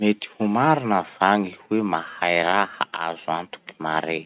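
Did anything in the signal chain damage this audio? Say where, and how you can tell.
No, the chain did no damage: this speech came over a WebRTC call path using the G.711 mu-law codec at 64 kbps, so the absence of anything above 4 kHz is that codec's normal band limit rather than a defect.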